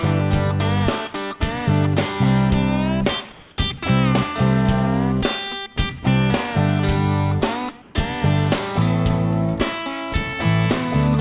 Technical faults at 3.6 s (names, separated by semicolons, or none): comfort noise in place of the background